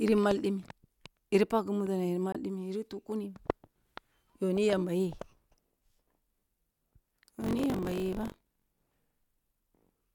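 At 2.32 s the sound cuts out for a brief moment, ending by 2.36 s. The gap is about 21 ms of missing audio, which fits a single lost frame. The speech picks up afterward as though it had kept playing through the gap. This is likely a Bluetooth dropout. Packets bound for the headphones arrived too late and were discarded. The output stayed silent until good data resumed.

From 7.40 s to 8.98 s there is buffer tearing. The speech takes on a robotic buzz at 46.9 Hz. That rate fits a 1024-sample buffer. The writing side and the reading side have drifted out of step. They now cross inside every period. About a tenth of each buffer holds stale audio, roughly 40 ms old. Hard joins on both sides of it produce the rattle. The buzz rides only on the speech.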